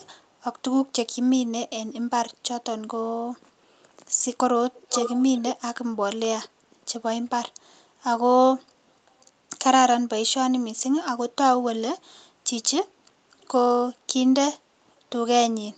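An echo canceller on the far end of the call likely let part of its loudspeaker pickup through, so this echo leak sends the speech back about 430 ms late. At 0.02 to 0.09 s and again at 13.4 to 13.48 s the returned copy is a very faint scrap, far below the speech. From 4.74 to 5.47 s it is much stronger, nearly as loud as the speech itself, giving a clear delayed double of the voice.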